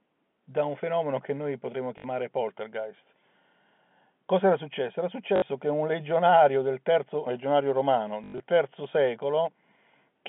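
At 1.98 s, 5.36 s and 8.24 to 8.4 s there's packet loss with the last packet repeated. The receiver keeps replaying stale audio through gaps of 60 ms, 60 ms, then 120 ms spread over 160 ms, so you hear robotic stutters buzzing around 50 Hz, which fits 20 ms packets, over the telephone-band sound.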